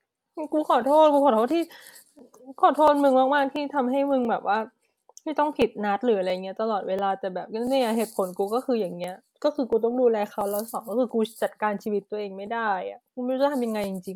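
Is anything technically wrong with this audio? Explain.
Yes. From 0.14 s to 13.84 s the speech carries clock drift buffer slips: a click or pop recurring every 0.68 s, about twenty in all. The likely cause is two devices on separate clocks, mismatched by roughly a thousand parts per million, so a buffer periodically drops or repeats a few dozen samples. On a waveform each slip is a discontinuity; a spectrogram shows thin vertical broadband lines at that steady spacing.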